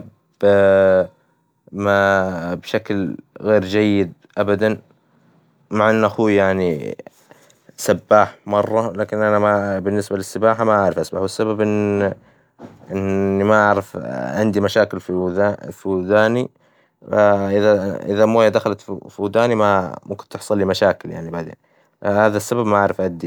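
No faults to report; nothing audible in the recording needs attention.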